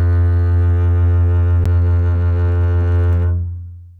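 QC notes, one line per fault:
1.64 s CD skip: the laser jumped off its track onto another turn of the disc's spiral, so the player muted for about 10 ms and resumed from a different point, heard as a tick and an abrupt jump in the music.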